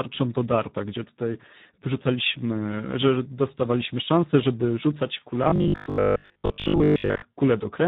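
The Speex codec runs at a low setting throughout, leaving too few bits to rebuild the excitation signal of this speech. The damage is heavy, which fits a bitrate around 8 kbps. The voice comes out noisy and hoarse.

From 5.44 s to 7.24 s, just after "dostawaliśmy szansę żeby rzucać", there is robotic sound from repeated short buffers. New audio is likely arriving too seldom, so playback loops the most recent fragment to fill the gaps and skips the real material. Most of this stretch is repeated. The loops impose a rigid 50 Hz buzz, which points to a buffer of about 20 ms. The voice turns metallic and droning while still roughly tracking the speech.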